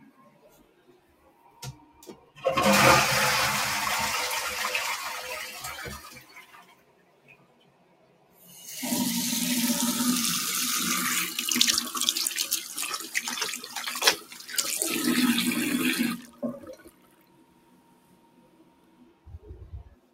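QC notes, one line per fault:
Throughout: noise suppressor applied to music or sounds. A speech-tuned suppressor keeps treating steady sound as noise, so the level swings by around 20 dB and the sound pumps and thins.
0.00–2.38 s, 5.98–8.52 s, 13.59–13.76 s, 14.17–14.51 s, 16.18–16.43 s, 16.59–19.47 s, 19.86–20.14 s: sound cut by the noise suppressor. Held and decaying sounds sink by about 6 to 14 dB, worst in the longer stretches, while sharp onsets slip through.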